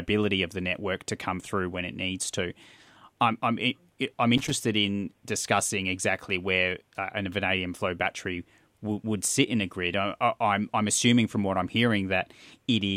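At 4.38 s a burst of loose connector crackle runs for about 0.13 s, to 4.51 s: a worn contact briefly making and breaking chops the speech into irregular scratchy bits. A waveform shows jagged dropouts and spikes; a spectrogram shows scattered broadband vertical streaks.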